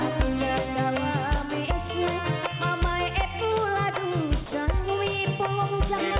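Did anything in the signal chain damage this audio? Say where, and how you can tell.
Yes, at 4.46 to 4.52 s the sound gives way to steady comfort noise for about 60 ms before picking back up. That's sound dropped by the voice detector, and it looks like the likely cause is call processing at the sending end: the detector read a quiet stretch as background, stopped sending, and the receiver filled the hole with generated noise. You lose roughly 50 ms of real sound there. The call path itself, with nothing above 4 kHz, fits a G.711 mu-law leg at 64 kbps.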